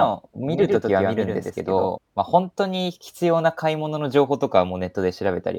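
From the very start of this speech clip until 1.98 s, every sound is followed by a second copy of itself about a tenth of a second later, only a few decibels quieter, roughly 5 dB down. The copy is full-band and dry, with no decay or room colour, and it cuts off abruptly at 1.98 s. This doubled audio track is likely caused by the same signal being captured a second time through a slower path, or by an edit leaving two out-of-step copies mixed together.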